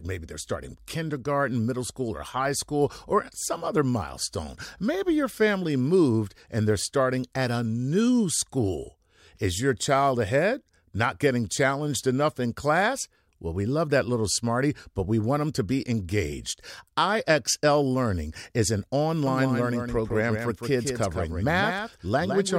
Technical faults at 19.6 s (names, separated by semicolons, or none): doubled audio track